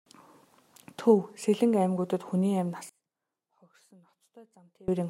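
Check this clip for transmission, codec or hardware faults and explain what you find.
One fault: from 2.89 to 4.88 s the speech suddenly drops by about 27 dB, collapsing into a faint residue before recovering. The likely cause is one channel inverted: with one stereo channel's polarity reversed, the centred speech common to both cancels when summed to mono, leaving only the small difference between them.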